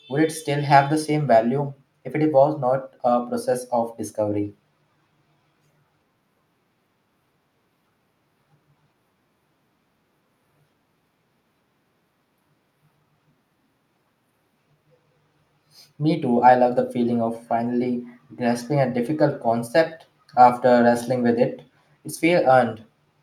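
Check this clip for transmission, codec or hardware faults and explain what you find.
One fault is present: automatic gain rising, from 0.07 to 4.5 s. The gain control judged the input too quiet. It raised its gain slowly, by about 4 dB. The speech and the background noise swell together over those seconds.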